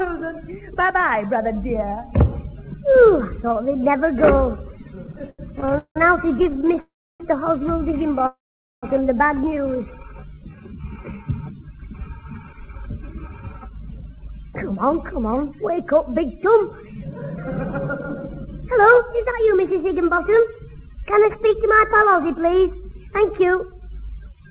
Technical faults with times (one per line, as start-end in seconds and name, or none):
5.04-6.78 repeated stalls (stutter)
6.80-7.22 call audio freeze
8.27-8.85 call audio freeze
10.03-11.24 jitter buffer slow-down
12.53-17.49 jitter buffer speed-up
18.47-24.50 jitter buffer speed-up